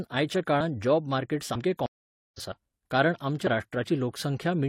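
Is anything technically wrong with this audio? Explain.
Yes, there is a stream reconnect in this speech clip. From 1.86 s to 2.41 s the audio drops to silence for about 0.48 s. The connection broke, the player sat idle until it re-established the stream, then started a new decoder partway through. Because the stream kept running in the meantime, the speech resumes roughly half a second further on than where it stopped, so a stretch of material is skipped rather than delayed.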